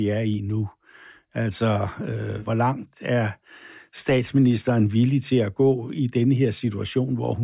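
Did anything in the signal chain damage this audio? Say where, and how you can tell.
No, nothing in the chain audibly damaged this recording.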